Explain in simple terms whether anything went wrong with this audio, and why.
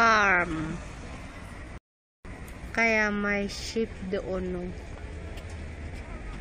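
Something did go wrong. At 1.78 seconds the sound suddenly stops and goes silent. It picks up again at 2.25 seconds, right where it left off. This is a rebuffering stall. The player ran out of audio it had already downloaded, so it had to pause and wait for more to arrive. No sound is missing. The gap just adds about half a second of silence to the playback.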